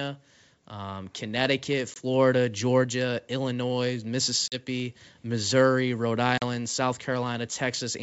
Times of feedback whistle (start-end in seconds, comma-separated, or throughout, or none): none